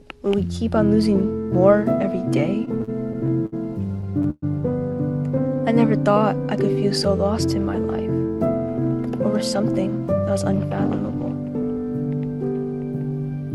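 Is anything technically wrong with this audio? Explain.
Yes, three jitter-buffer problems show up.

From 2.65 to 4.44 s there are repeated stalls (stutter). Packets kept arriving late, so the buffer ran dry about ten times and the receiver stretched out the last sound, roughly 0.3 s in total with the longest hold at 120 ms. Nothing drops out, but the sound drags and hiccups.

Between 5.35 and 6.20 s there's a jitter buffer slow-down. The receiver was rebuilding its reserve by repeating tiny pitch-period-sized chunks, adding about 52 ms. Playback runs at about 95% speed with unchanged pitch, so things sound slightly drawn out.

Then from 10.12 to 10.54 s comes a jitter buffer speed-up. The buffer held too much, so the receiver trimmed short pitch-period slices, around 40 ms in all. The audio runs at about 107% speed at the same pitch and sounds a bit rushed.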